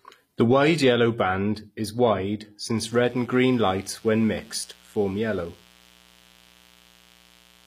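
From the start, the treble was likely rebuilt by HE-AAC compression at a low bitrate, around 24 kbps. Upper bands are copied up from lower ones instead of coded, so s sounds turn gritty and lispy, and nothing is present above 15.5 kHz.

At 2.77 s, just after "yellow band is wide", unshielded or switching circuitry injects sharp spikes twice per 60 Hz cycle, producing mains buzz. A steady, raspy hum with harmonics climbing into the kilohertz range runs to the end, roughly 30 dB below the speech.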